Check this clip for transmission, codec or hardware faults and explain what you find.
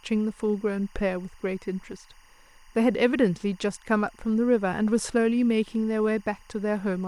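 One fault is present throughout the speech: timecode bleed. A faint chirping warble sits well below the voice, alternating near 1 and 2 kHz and about 35 dB down. Linear timecode running at 23.976 frames per second is leaking in from an adjacent track or cable.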